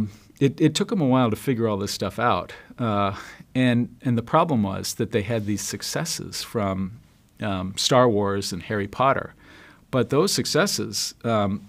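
No technical faults can be heard anywhere in the clip. The sound runs without any dropouts, clicks, glitches or other disruptions.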